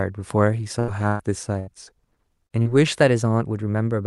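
Speech that breaks up three times early on: at 0.79–0.91 s, 1.08–1.22 s and 1.59–1.70 s the sound stretches into a held buzz or hiss that fades before resuming further along. These are bursts of packet loss. The receiver extended the last sound for roughly 80, 115 and 80 ms, and about 80, 120 and 80 ms of the original never arrives. Later, brief smears at 2.47–2.53 s and 2.62–2.68 s are short concealed packet losses, each around 40 ms of missing audio patched over with about 30 and 35 ms of continued sound, so a small piece of speech blurs or disappears. From 2.99 s to the end the speech runs about 6.2% fast and sits about a semitone (104 cents) sharp, a sudden detuning that is likely a drift correction step, where clock-matching software jumped the playback rate to rebalance its buffer.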